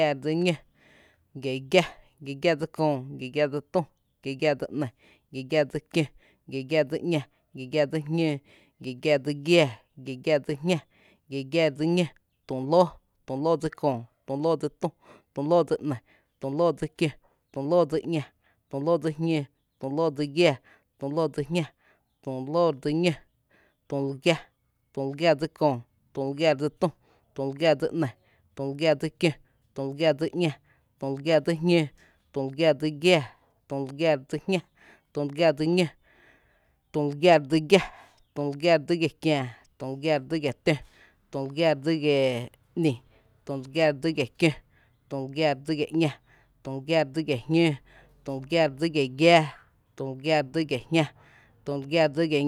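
Speech recording with no audible technical faults anywhere in the clip.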